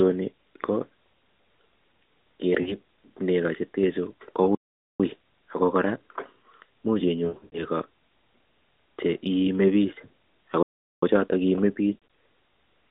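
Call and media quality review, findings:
Lost AMR speech frames, 2.62–2.76 s, just before "nego chetenchu": brief warble and dip, about 40 ms concealed, consistent with two dropped 20 ms frames. 7.24–7.66 s: repeated smearing and fading, roughly 220 ms concealed across 280 ms, longest run 80 ms. 11.94–12.02 s, after "che iimebik ako choton": choppy warble, about 100 ms across 160 ms. Decoder replaying last good pitch and vocal-tract parameters at decaying gain.

Playback stall, 4.55–5.00 s, between "nego chetenchu" and "ako kora": output silent about 445 ms mid-flow, then resumes. 10.63–11.03 s: silent about 396 ms. Player likely starved of data or its output thread blocked. Audio heard through a narrowband 250 Hz to 3.7 kHz mobile-codec band.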